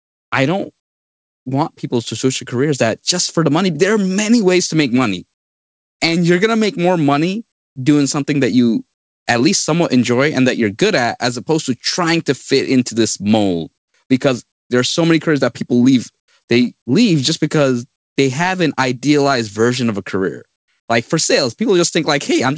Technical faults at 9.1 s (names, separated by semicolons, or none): comfort noise in place of the background